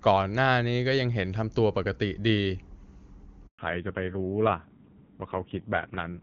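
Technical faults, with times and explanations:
3.47–3.59 s, handover gap: the speech cuts out for 120 ms as the call switches networks and no frames arrive, leaving a brief silence.
3.59 s to end, fallback to narrowband: the call drops from HD Voice to a low-rate narrowband codec, so nothing above 4 kHz remains and the speech sounds duller and rougher.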